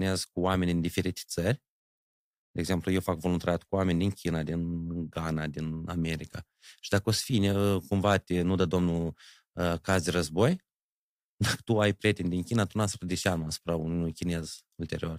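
From 8.07 to 8.15 s, just before "te nu dă domnul", hard clipping flattens peaks overdriven by about 4 dB, giving a short crackle.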